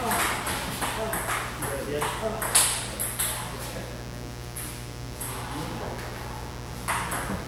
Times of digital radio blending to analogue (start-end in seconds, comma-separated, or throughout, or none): none